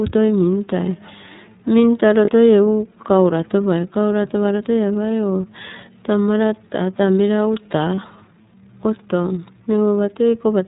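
The whole thing runs through the iLBC codec, and you can plainly hear it: nothing above 4 kHz gets through, and the speech has that slightly rough, synthetic edge from each frame's excitation being coded on its own. The coarseness suggests the lower-rate 30 ms frame mode.

At 2.25 s and again at 7.94 s there are lost iLBC frames, each gap about 30 ms, which fits a single dropped frame. The decoder fills it by repeating the last pitch cycle with some noise, so you get a brief buzzy, held-vowel smear before the speech snaps straight back.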